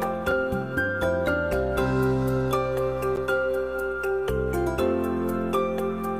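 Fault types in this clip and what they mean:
Block of digital silence: the output was briefly replaced by zeros, likely because a buffer went unfilled in time. It is heard as abrupt cuts at 0.31 s (about 3 ms) and 3.16 s (about 12 ms, which fits a 512-sample buffer), each giving a tick.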